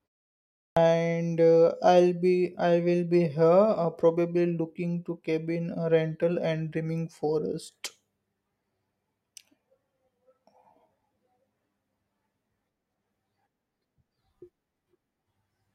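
At 0.6 s, after about 0.6 s of silence, the speech comes in with a clipped start after a pause: roughly the first 165 ms, up to 0.77 s, is missing, so the opening sounds are cut off and the word begins abruptly. The output device went idle during the silence and was still waking when the sound resumed. Unlike muted pauses, which only drop background in gaps, this fault loses actual speech.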